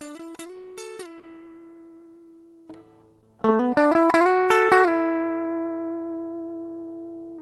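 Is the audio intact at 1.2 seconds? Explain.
No, there's a short concealed packet loss from 1.19 to 1.25 s. About 40 ms of audio never arrived in time, so the receiver stretched the preceding sound to cover the gap and then blended back in. You hear it as a brief smear or wobble.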